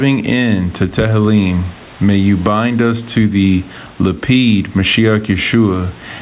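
Throughout the speech, the level pumps, swinging by around 10 dB, and the dynamics sound squashed. The likely cause is gain pumping: the microphone gain is far too high, and a fast limiter clamps it on every peak. A waveform shows a flattened envelope. On a spectrogram, the faint room-noise haze sits beneath the call codec's 4 kHz ceiling.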